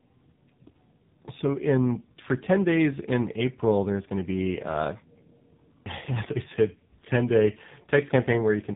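Speech marred throughout by tandem speech coding: two low-rate speech codecs in sequence, consistent with GSM full rate then AMR-NB, compound their losses into rough, warbling, muffled sound. A spectrogram shows nothing above 3.7 kHz and smeared, blotchy harmonics.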